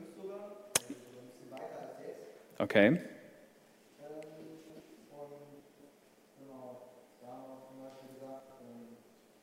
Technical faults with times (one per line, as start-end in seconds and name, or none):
4.40-4.80 chunks out of order
5.60-5.90 chunks out of order
8.40-8.60 chunks out of order